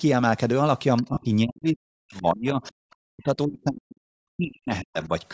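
Speech with a breathy, grainy edge throughout and a band that stops at 8 kHz. The edge is likely Bluetooth LC3 compression, plainly audible, in which a low bitrate (consistent with around 32 kbps) leaves the upper spectrum noise-filled rather than carrying real detail. Brief scraps of the other side's voice leaking through appear at 0.96–1.02 s, 2.63–2.68 s and 5.02–5.07 s, at roughly 15, 25 and 30 dB below the speech. Each is likely residual loudspeaker echo that the echo canceller failed to remove from the microphone. From 1.02 to 5.11 s the speech is suppressed in double talk, dipping and breaking up for around three seconds in total, with the deepest drop of about 40 dB. The likely cause is the canceller turning the talker down along with the echo while both sides spoke. At 1.14–1.17 s there are lost LE Audio frames, a 30 ms gap consistent with three 10 ms frames. The decoder bridges the gap by reusing the last spectrum with randomised signs, so the sound smears into noise for that instant.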